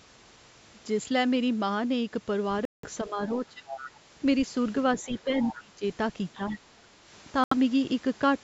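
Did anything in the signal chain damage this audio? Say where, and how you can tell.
Yes. Speech cuts to silence at 2.65 to 2.89 s and 7.44 to 7.54 s, then resumes: a Bluetooth stall, likely the headset buffer running dry during playback.

Speech dips by roughly 10 to 25 dB at 3.04 to 3.67 s, 5.05 to 5.83 s and 6.36 to 6.57 s, likely speech suppressed in double talk by the call's echo canceller.

A second voice, about 10 to 25 dB below the speech, surfaces at 3.31 to 3.35, 3.69 to 3.99, 4.99 to 5.20, 5.40 to 5.63 and 6.34 to 6.58 s: the other side's voice leaking through, likely incomplete echo cancellation.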